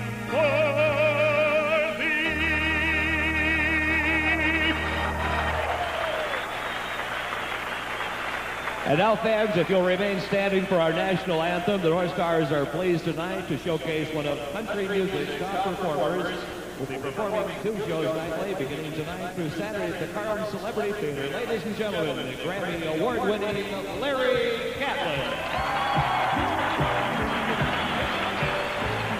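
No technical faults can be heard anywhere here.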